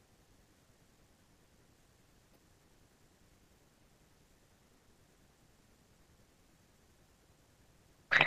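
At 2.33 to 2.36 s the speech is briefly overlaid by DAB burbling: a short burst of noise blips in individual frequency bands. Weak reception let bit errors slip past error correction into the MP2 data, corrupting samples, with an error rate around 0.15 percent. Three frames were damaged. Unlike a dropout or packet loss, the burbling does not cut the audio out.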